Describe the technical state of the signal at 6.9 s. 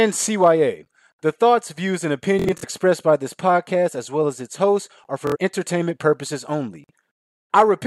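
At 6.9 s the speech signal is intact, with no audible fault at that moment.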